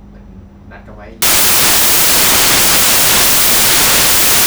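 Speech clip in which, from 1.22 s to the end, the samples are built from the wrong bytes: the decoder assembles each sample misaligned or byte-swapped, so the rapidly fluctuating low-order bits land in the most significant positions. The result is loud, harsh broadband noise replacing the signal for the rest of the clip.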